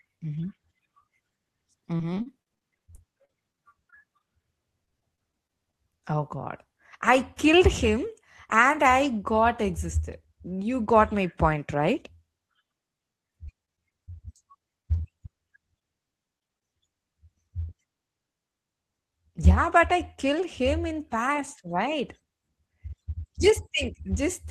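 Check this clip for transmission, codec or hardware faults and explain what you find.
Two transmission faults affect the speech: repeated packet loss in three stretches, and a jitter buffer speed-up.

Repeated packet loss (robotic sound) occurs at 1.97 to 5.75 s (26 gaps, longest 46 ms, about 14% of the span concealed), 13.45 to 15.05 s (9 gaps) and 15.79 to 16.63 s (4 gaps). Packets kept going missing, and the receiver filled each gap by extending the previous sound. The result is choppy speech with fragments lost.

The jitter buffer speed-up occurs at 18.41 to 19.67 s. Audio had piled up in the buffer, so the receiver cut short pitch-period slices, around 70 ms in total. The speech runs at 105% speed with unchanged pitch and sounds hurried.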